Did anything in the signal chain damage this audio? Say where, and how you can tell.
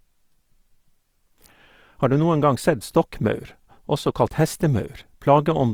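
Yes. The codec stage damaged the clip throughout. Starved bands have been filled with folded or noise content, likely Opus compression in its CELT mode at a rate near 24 kbps. The speech sounds plainly grainy and rough, though its bandwidth still reaches 20.3 kHz.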